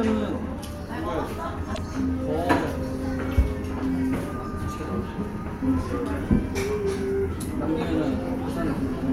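At 1.71 s, damaged data in a compressed stream produces a brief disturbance lasting until 1.78 s. The decoder met corrupted frames, misread them and resynchronised at the next header.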